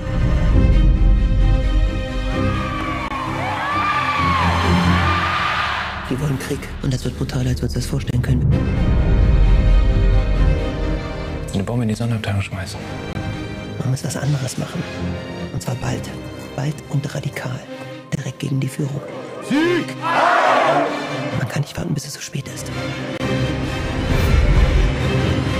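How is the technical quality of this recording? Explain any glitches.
The recording has two kinds of playback glitch: one tiny stutter and a regular series of brief dropouts.

At 2.81 s a repeated buffer sounds as a quick click or buzz. A 1.45 ms slice, which fits a 64-sample buffer, played three times because fresh audio arrived late.

At 3.08, 8.11, 13.13, 18.15 and 23.18 s there is a gap between chunks. Each is a hard-edged hole of about 23 ms, about 5 s apart. Silence was inserted at each chunk join, and no sound is lost.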